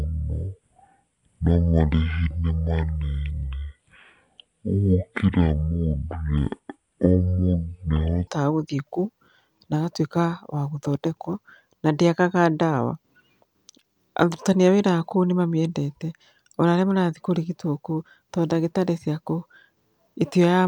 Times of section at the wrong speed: 0.00-8.27

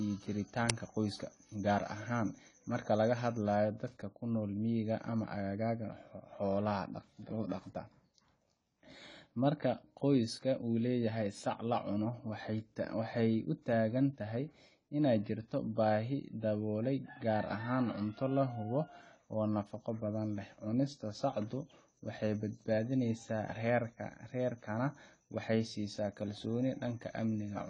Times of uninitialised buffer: 0.70

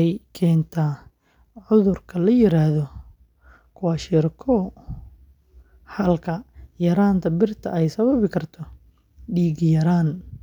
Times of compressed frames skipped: none

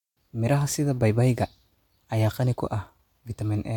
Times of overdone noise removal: none

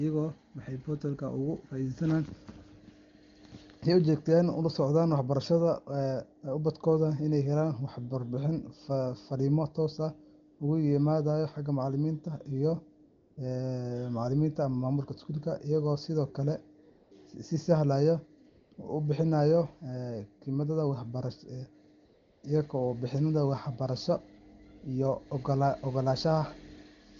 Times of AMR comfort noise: 10.53-10.59, 13.05-13.37, 16.89-17.11, 18.49-18.77, 22.05-22.43

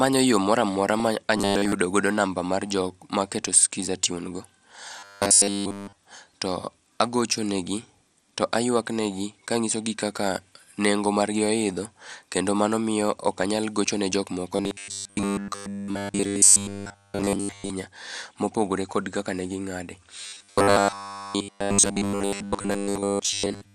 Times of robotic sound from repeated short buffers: 1.37-1.72, 4.99-5.98, 14.56-17.70, 20.22-23.74

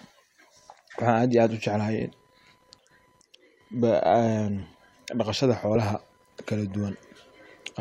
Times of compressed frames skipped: 1.99-2.01, 4.62-4.64

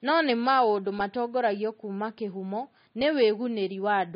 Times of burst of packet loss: none

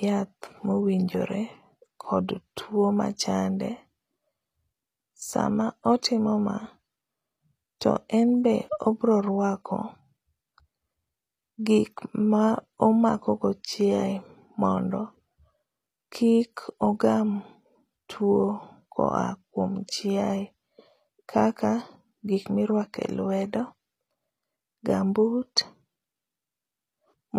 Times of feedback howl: none

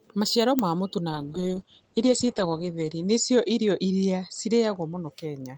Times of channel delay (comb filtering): none

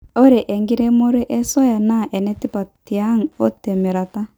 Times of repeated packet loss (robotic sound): none

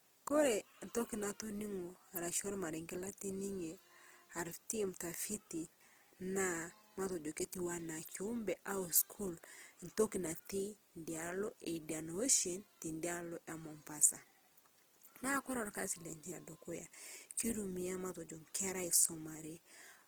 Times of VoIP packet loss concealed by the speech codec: none

